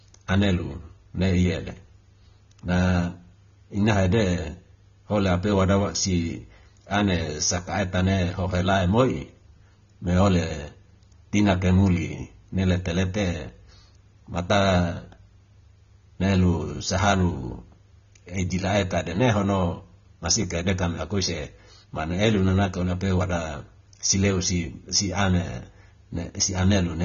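Speech throughout, with plainly audible AAC compression damage, likely from low-bitrate AAC-LC around 24 kbps: nothing above 6.9 kHz, plus smeared, warbling texture that distinguishes it from simple low-pass filtering.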